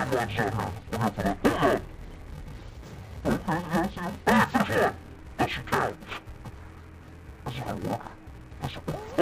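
Throughout the clip, interleaved audio is being read as planar. Each short block of alternating left and right samples gets split down the middle, with the first half treated as left and the second as right, so both channels carry the material at half speed. The blocks here last about 2.9 ms, which fits a 128-sample buffer, far too short for an octave drop to register. Instead the sound comes out dull and robotic, overlaid with a steady buzz at 345 Hz, the rate at which the blocks repeat.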